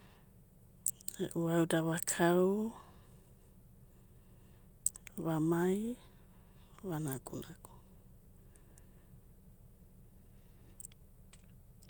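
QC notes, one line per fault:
No faults heard.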